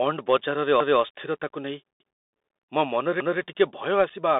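A short speech recording carried over a Bluetooth CVSD headset codec, with two timed faults on top. The CVSD link is audible throughout. The line passes only from about 250 Hz to 3.7 kHz, so the voice sounds thin and boxy. The 64 kbps one-bit delta modulator adds a granular hiss under the speech, and sibilants turn scratchy where loud high-frequency energy outruns the adaptive step size. On a spectrogram everything above 3.7 kHz is empty and sharply cut off, and there is a noise floor even between syllables. From 0.80 to 1.00 s there are overlapping chunks. The audio appears to have been processed in 1.0 s blocks, with each block beginning before the previous one finished, so a 200 ms stretch plays twice at the join and produces a stutter. A waveform shows the same 200 ms shape repeated back to back, with a discontinuity where the two copies meet. At 4.10 s there is unconcealed Bluetooth headset packet loss. 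About 7.5 ms of audio is missing, which fits a couple of lost packets, and the gap was left as a hard hole rather than filled in. It is heard as a brief abrupt dropout. On the waveform it shows as a thin flat notch with steep edges, and on the spectrogram as a narrow vertical blank stripe through the speech band.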